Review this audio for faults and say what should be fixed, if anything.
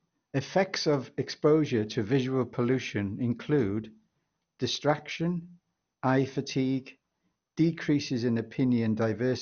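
The whole clip sounds dull, with nothing above about 6.5 kHz and a gurgly, grainy edge on the speech. That points to MP2 compression, likely at a rate around 48 kbps, starving the upper sub-bands so they drop out and the remaining bands quantise coarsely. To prevent it, encode at a much higher bitrate or keep a lossless master.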